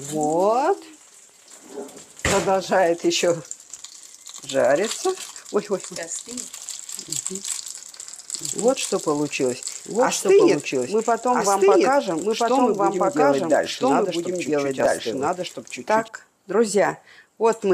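A second, slower capture path is likely feeding the same audio into the mix again, giving a doubled audio track from 8.35 s to 16.08 s. A dry, full-band copy at about the same level trails roughly one and a half seconds behind, starting and stopping abruptly.

From 14.80 s to 15.03 s the processor falls behind and misses about seven buffer deadlines, each buffer only a millisecond or two long. Each missed buffer is skipped, and the hard-edged gaps add up to a brief burst of processor overload crackle over the sound.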